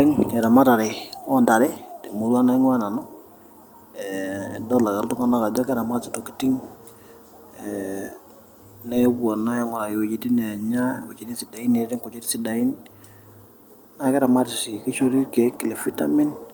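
No technical faults are audible in this recording.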